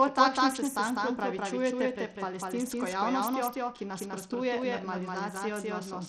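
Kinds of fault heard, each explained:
Doubled audio track: Two copies of the same signal appear to be summed, most likely because a second capture path runs late or an edit holds two copies out of step. Throughout the speech, an equally loud, full-band repeat trails the original by roughly a fifth of a second, with no reverb tail or room colour, so every syllable lands twice and consonants smear into a flat, slapback-like echo.
Bluetooth SBC compression: The speech appears to have passed through the basic Bluetooth SBC codec at a low data rate, likely around 80 kbps, where the encoder splits the band into a few wide slices and gives the faint upper ones too few bits. Throughout the clip the treble thins out and flickers, sibilants lose detail, and a plainly audible gritty, aliased hash sits on top of the voice.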